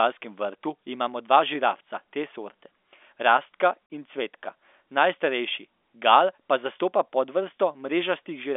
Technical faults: packet loss filled with silence

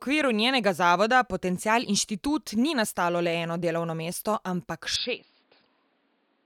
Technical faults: input switched to a poorer device

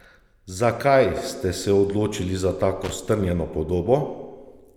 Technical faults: loose connector crackle

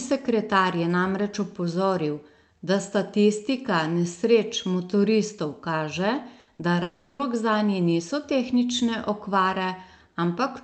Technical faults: burst of packet loss; short concealed packet loss; long network dropout

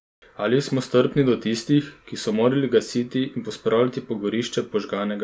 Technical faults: none

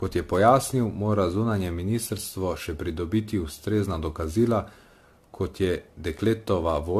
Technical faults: generation loss

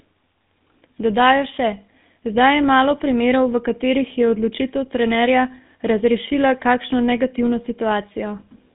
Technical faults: GSM full-rate codec

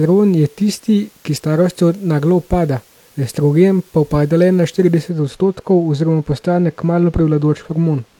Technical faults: de-emphasis applied wrongly

